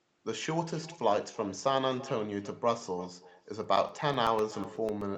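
Throughout the speech, echo with no canceller is audible. A quieter copy, about 18 dB down, trails each phrase by roughly a third of a second.

From 3.64 to 5.02 s, periodic USB or driver dropouts tick every 0.125 s. Each one blanks a few milliseconds of audio with silence.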